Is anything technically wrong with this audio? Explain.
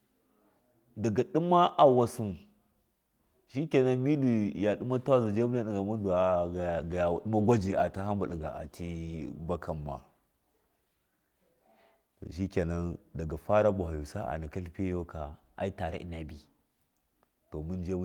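Yes. From 6.26 to 9.37 s there is a call bitrate drop. The encoder coded more coarsely, and the speech turns rough and watery, consistent with a fall from 32 to 18 kbps.

From 9.77 to 10.54 s, the speech slows by about 6% and drops about a semitone. From 15.35 to 16.95 s, just after "naka tlifiyago", it speeds up by about 6% and rises a semitone. Both are likely drift correction steps resampling to rebalance a clock-matching buffer.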